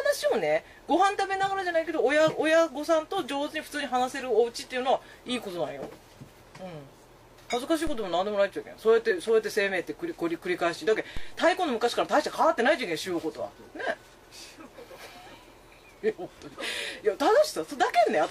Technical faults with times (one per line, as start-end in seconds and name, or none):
7.87 DC step
9.06-9.12 compressed frames skipped
11.17 DC step